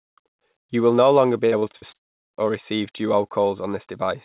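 From 1.46 to 1.94 s, right after "will no longer be", the speech breaks up with repeated packet loss (robotic sound). Five short holes, the longest about 57 ms, are each patched by stretching the preceding sound. That concealment fills about 160 ms, a third of the stretch, giving a choppy texture with pieces missing. Unlike a dropout, real audio keeps returning between the holes.

Then, from 1.96 to 2.35 s, comes what is likely a long network dropout: about 0.38 s of audio is lost in one piece. There is no stutter. The concealment gives way almost at once to near-silence, and the speech resumes at "or receive" with that stretch simply gone. Throughout, the band stops at 4 kHz, which fits a G.711 call path at 64 kbps.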